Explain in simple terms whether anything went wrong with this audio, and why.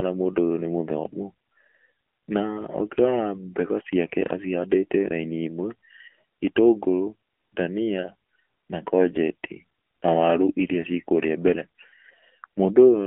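Something did go wrong: the speech runs through an AMR narrowband mobile codec throughout, like a phone call. Only 250 Hz to 3.4 kHz survives, so it's thin and buzzy.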